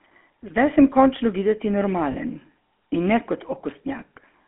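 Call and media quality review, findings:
GSM full-rate codec, throughout: buzzy, gravelly roughness, plainly audible. Band limited to 250 Hz–3.4 kHz, consistent with 13 kbps full-rate coding. Pulse-excited vocal-tract model. Spectrogram: nothing above 3.4 kHz, smeared harmonics, grainy regular-pulse texture.

Lost GSM frames, 2.12–2.15 s: brief rough, metallic ring. Fits a single 20 ms frame concealed by repeating the last good frame's parameters. Spectrogram: short frozen, smeared slice. Waveform: repeated cycle shape.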